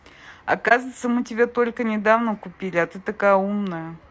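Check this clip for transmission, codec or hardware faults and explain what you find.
Two faults are present: codec damage throughout the speech and one brief dropout.

Low-delay AAC compression: the speech was likely encoded with AAC-ELD, the short-frame codec of video calls, at a rate consistent with about 32 kbps. At this low bitrate the voice sounds plainly rough and grainy throughout.

AAC frame loss with muting: from 0.68 to 0.73 s, what sounds like a single lost frame was zeroed by the decoder. The overlapping windows fade the sound out and back in, leaving a brief dip in the speech.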